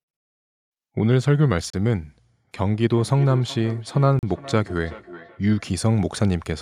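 At 1.70 to 1.74 s the speech drops to silence for 34 ms and then carries on, likely a Bluetooth stall where the headphone buffer ran dry. From 2.91 to 5.66 s there's feedback echo between two devices: a second device in the room plays the call back into a microphone, so the speech returns roughly every 0.4 s, with the loudest repeat about 17 dB below the speech. A second Bluetooth stall cuts in at 4.19 to 4.23 s, a 39 ms gap in the middle of that echo.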